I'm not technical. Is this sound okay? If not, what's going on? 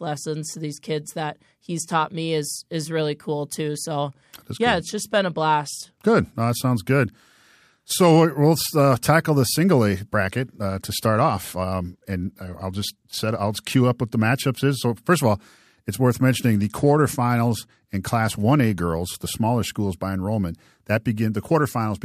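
No. A Bluetooth SBC bit pool drop happens at 4.08 to 6.54 s, 10.69 to 13.82 s and 16.46 to 18.72 s. The wireless link got crowded, so less detail was sent. Crisp high sounds turn dull and gritty until it recovers.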